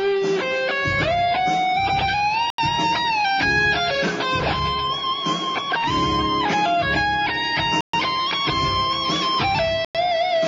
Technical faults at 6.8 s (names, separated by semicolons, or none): none